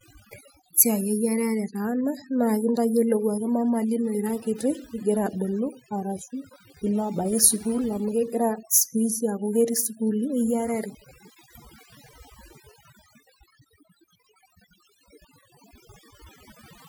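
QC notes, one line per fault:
Throughout, overdone noise removal: the noise reduction was set too aggressively, pulling individual frequency bands down or out whenever they sat near its noise estimate and taking quiet parts of the voice with them. The background drops and breaks up into twinkling specks.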